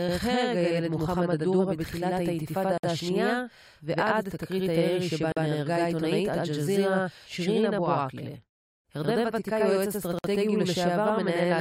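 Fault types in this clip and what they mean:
Channel delay (doubling): Throughout the speech, every syllable is followed by a second copy at the same level about 85 ms later, heard as a slapback echo or a flammed doubling. One channel runs late by a long buffer, which fits a 4096-sample buffer at 48 kHz. When the two channels are summed to mono, the late copy does not blend as a comb-filter colouring but stands apart as a distinct repeat.
Gap at a join of encoded pieces: The speech abruptly drops out three times and then resumes exactly where it stopped, with nothing missing. The silences run 2.78–2.84 s (58 ms), 5.32–5.37 s (45 ms) and 10.19–10.24 s (56 ms), with edges that are softened. Each gap marks a join between separately encoded pieces where the encoder's start-up silence and the padding of the final frame were never trimmed.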